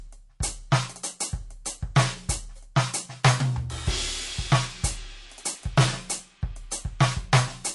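MP3 compression throughout: the music sounds watery and swirly, with nothing above 11.3 kHz, likely from an encoder starved of bits, which fits roughly 48 kbps.

Hard clipping at 1.96–2.02 s, 3.25–3.31 s, 5.78–5.84 s and 7.01–7.39 s: peaks overdriven by about 8, 13, 9 and 11 dB were cut flat, adding crackle and fuzz.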